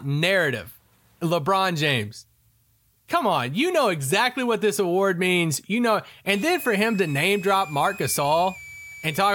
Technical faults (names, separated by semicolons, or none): switching supply whistle